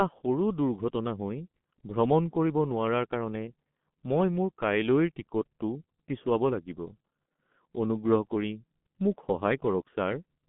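Throughout the speech, the sound points to G.723.1 codec coding at roughly 6 kbit/s. The band runs from 150 Hz to 3.5 kHz, with nothing above 3.8 kHz. Heavy codec damage from its coarse, slowly updated voice model leaves speech muffled and hoarse, with smeared consonants.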